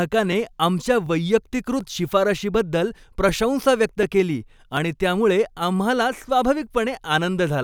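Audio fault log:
0.32–6.99 s, clock drift buffer slips: a regular click recurs every 0.74 s, about ten in all, each a brief tick over the speech. The steady spacing points to the likely cause: two devices on separate clocks, one running fast by around a tenth of a percent, so the buffer between them creeps until a short block of a few dozen samples is dropped or repeated, leaving a discontinuity in the waveform each time.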